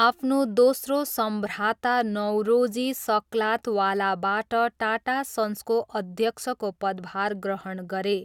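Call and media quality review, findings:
No audible faults found on review of the speech; nothing to log against any component.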